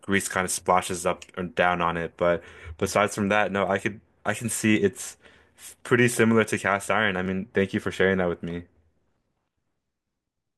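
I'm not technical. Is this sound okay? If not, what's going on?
No. At 7.26 s there is a block of digital silence: for about 0.67 ms the speech drops straight to silence and then comes straight back, with no fade on either side. The gap is far too brief to hear as a hole, but the abrupt cut and return each make a jump in the signal, so it comes across as a single small tick. The missing stretch is the size you'd expect from a 32-sample block.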